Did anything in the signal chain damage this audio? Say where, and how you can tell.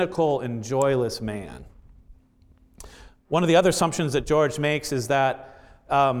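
Yes. An electrical switching spike hits the speech at 0.82 s as a single sharp snap, about -20 dBFS, likely a nearby switch arc coupling into the analogue wiring.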